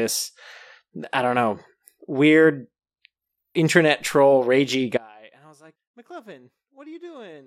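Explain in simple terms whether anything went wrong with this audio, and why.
At 4.97 s the speech abruptly drops to a faint residue until the end, an audio dropout, likely from the signal being lost while the connection stayed live.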